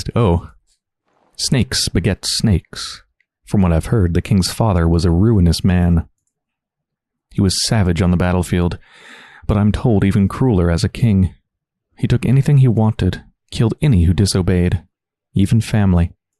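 No faults can be heard anywhere in the recording.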